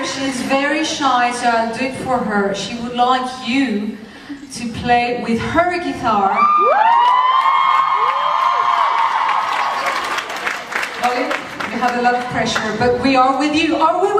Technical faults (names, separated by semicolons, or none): none